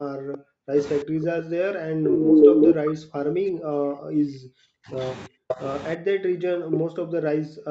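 From 0 to 0.79 s the speech is heavily turned down. This is speech suppressed in double talk. The drop reaches around 40 dB. The talker fades and breaks into pieces. The cause is likely an echo canceller that could not tell the near talker from loudspeaker echo while both sides spoke, so it attenuated everything. The same suppression returns from 1.03 to 4.98 s, a long stretch of about four seconds. It comes again from 5.27 to 5.64 s and from 5.96 s to the end.

Inside these stretches there is echo leak. From 2.05 to 2.73 s a delayed copy of the speech trails by about 0.36 s. It sits around 10 dB louder than the direct speech. This is likely residual loudspeaker echo that the canceller failed to remove and sent back. Short scraps of echo recur at 5.48 to 5.55 s, delayed 0.38 s, and at 6.71 to 6.79 s, delayed 0.39 s. Both sit at roughly the speech level.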